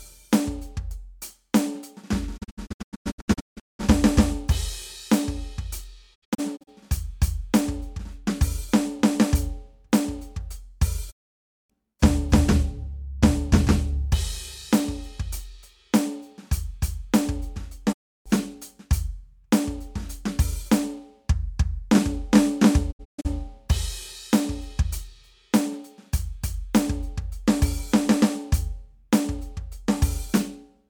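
The music suffers digital broadcast dropout at 2.36–3.81 s, 6.14–6.69 s, 11.10–11.72 s, 17.92–18.28 s and 22.91–23.27 s. The receiver lost valid frames and muted with 20 ms fades, so that stretch of the music is gone. The first, second and last break into several short holes. On the waveform and spectrogram these show as blank gaps whose lengths fit 32 ms frames.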